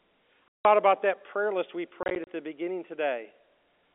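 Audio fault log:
0.48–0.65 s, packet loss filled with silence: A solid 170 ms hole cuts out the sound just before "about that prayer list". The receiver played silence for the missing data. Its edges are hard.
2.03–2.27 s, packet loss filled with silence: Between "that prayer list we" and "the beginning", about 90 ms drops out in short gaps spread over 240 ms. None is longer than 30 ms. This choppy pattern and the hole sizes point to 10 ms packets, heard over a narrow telephone band.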